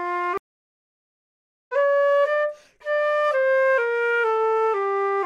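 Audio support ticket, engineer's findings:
Sound drops out 0.38–1.73 s, about 1.31 s of silence, then resumes at a later point, roughly 1.5 s of material skipped. Stream reconnect: connection lost, player silent, reconnected, new decoder started mid-stream.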